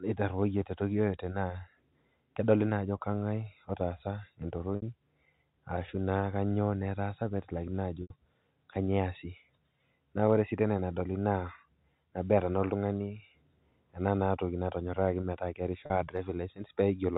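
At 4.76, 8.02 and 15.86 s the speech hits packet loss with pitch repetition: gaps of 60, 80 and 40 ms are bridged by looping the last pitch period, giving a brief buzzy held sound, the 80 ms one fading toward silence.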